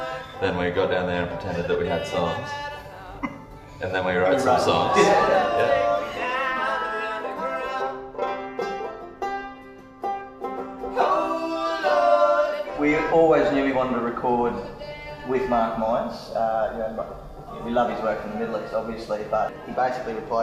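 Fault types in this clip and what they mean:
No fault types are present in this clip.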